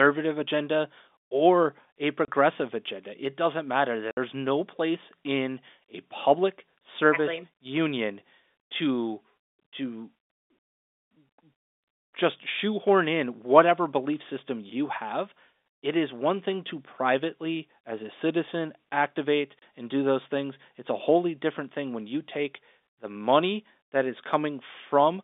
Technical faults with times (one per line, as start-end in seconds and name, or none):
2.25-2.28 packet loss filled with silence
4.11-4.17 packet loss filled with silence
19.59-19.62 packet loss filled with silence